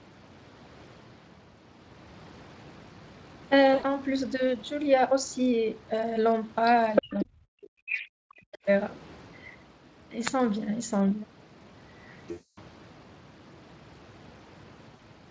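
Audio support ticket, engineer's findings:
VoIP packet loss concealed by the speech codec at 3.73–3.98 s, 12.31–12.59 s and 14.95–15.02 s. Audio smears into a buzzy tone or coloured noise that fades. Decoder extrapolates across roughly 100, 260 and 40 ms gaps, which fits 20 ms frames.

Other side's voice leaking through at 6.95–7.02 s, 7.19–7.25 s, 7.89–8.07 s and 8.52–8.58 s. Scraps of a second voice, from near-equal level down to far below. Likely residual loudspeaker echo the canceller missed.

Speech suppressed in double talk, 7.02–8.66 s. Talker dips and breaks up, at worst by roughly 40 dB, for about 1.5 s in total. Likely echo canceller attenuating both sides during overlap.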